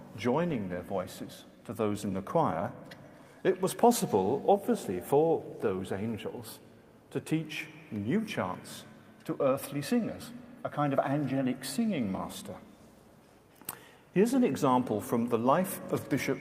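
Nothing here gives away a technical fault at any point; the sound just carries on steadily without a hitch anywhere along the way.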